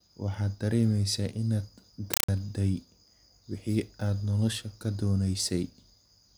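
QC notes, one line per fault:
2.14 to 2.29 s, compressed stream played as audio: an AC-3 bitstream, consistent with roughly 256 kbps, reached the output as raw samples instead of being decoded, so the speech gives way to loud chattering static from 5.33 ms noise bursts recurring 31.25 times a second between silent padding.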